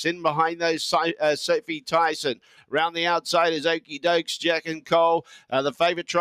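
A speech-style noise suppressor applied to music or sounds runs the whole way through, reading steady parts as noise and pumping the level by around 10 dB. It's the sound cut by the noise suppressor that stands out: from 2.35 to 2.73 s it dips about 12 dB, and from 5.23 to 5.52 s about 11 dB, with sustained material sinking and tails clipped short.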